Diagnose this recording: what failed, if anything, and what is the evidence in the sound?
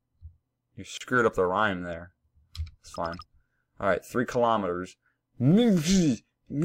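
Gap at a join of encoded pieces, from 0.97 to 1.01 s: a gap of about 33 ms drops into otherwise continuous sound, with its edges smeared by the codec, and the sound resumes exactly where it stopped. This is a codec-stage fault. Separately encoded pieces were joined without trimming, so one run's end-of-frame padding and the next run's start-up delay both remain as dead air. The joins recur every 6 s, which points to pieces of that length.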